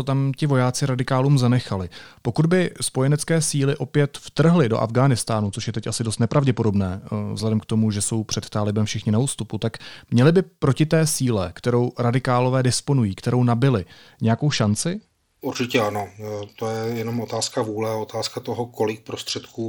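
Speech whose treble three times turns dull and gritty: 5.41–6.70 s, 14.26–17.78 s (after "radikálové disponují kterou nabili", before "otázka toho"), and 19.28 s to the end. These are Bluetooth SBC bit pool drops. The link starved the top sub-bands and coarsened the rest, which fits a bit pool falling from 31 to 12, around 88 kbps.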